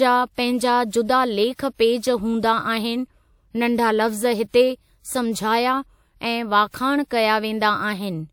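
Throughout the speech, two different kinds of coding artefact sit on top of each other and are heard together. Nothing is present above 20.1 kHz. The sound fits a WMA encode at about 96 kbit/s followed by MP3 at a similar rate, so the likely cause is transcoding between lossy codecs. A single low-bitrate encode gives only one texture. Here the second coder spent bits re-encoding the first one's artefacts and added its own.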